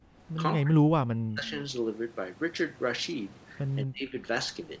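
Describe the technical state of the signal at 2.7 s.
At 2.7 s the speech is intact, with no dropout, click or distortion, only the ordinary call-path sound of a band that stops at 8 kHz.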